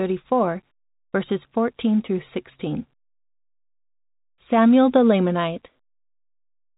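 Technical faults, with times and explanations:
The speech arrives through G.711 A-law telephone coding as expected, with the band ending around 3.8 kHz and only the faint level-following quantisation hiss that 64 kbps telephone coding carries, and no technical faults are present.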